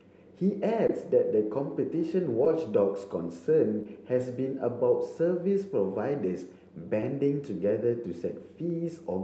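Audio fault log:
0.87–0.90 s, 2.45 s, 3.83–3.86 s, 7.01–7.03 s: short concealed packet loss. Packets of 10 to 20 ms arrived too late for the decoder, which extended the preceding sound, then blended back into real audio. Each gap is heard as a brief smear or wobble over the 8 kHz-limited Opus sound.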